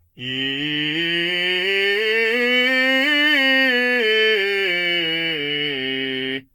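From start to finish the music carries generation loss, likely from around seven successive lossy passes near 70 kbit/s: swirly, smeared and hollow, with blurred attacks. A spectrogram shows nothing above 17.3 kHz, patchy holes through the upper bands, and softened transient edges.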